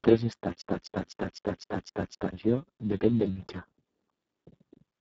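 Speex codec damage runs through the whole clip from the first moment. This CELP speech codec models the voice with very few bits for the excitation signal, and the damage here is heavy: the speech sounds hoarse and noisy and edges toward a robotic, vocoder-like buzz, which fits a setting near 6 kbps. The top of the band is a thin, noise-like fill rather than real detail, and nothing is present above 7.6 kHz.

A broken-record loop runs from 0.62 s to 2.32 s, where a fragment of about 0.25 s repeats exactly, back to back, seven times before normal playback resumes. The likely cause is that the player, encoder or stream stalled and kept re-sending the last chunk it held. Whatever speech belonged in that stretch is missing.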